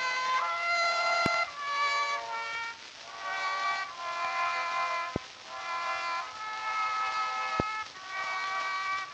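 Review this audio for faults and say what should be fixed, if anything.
Loud pop at 1.26–1.28 s, 5.16–5.18 s and 7.60–7.62 s: three single sharp pops, each lasting about 20 ms and peaking roughly 20 dB above the surrounding sound, which carries on underneath. The likely cause is a sudden voltage step or pulse, from a plug, switch, static discharge or driver glitch, entering the signal path, with the downstream circuitry shaping it into a brief thump. Secure all connectors, avoid switching during capture, and update or stabilise the audio driver.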